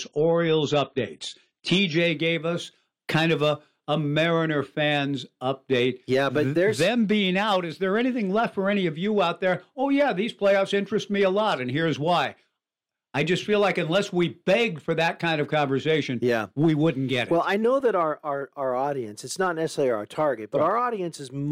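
From 0.0 to 2.0 s the speech sounds dull and smeary, with nothing above 9.9 kHz, then brightens suddenly, with no gap, just before "gave us kind of". This is an adaptive stream starting at a low bitrate, consistent with a 24 kbit/s AAC opening before a higher-quality switch.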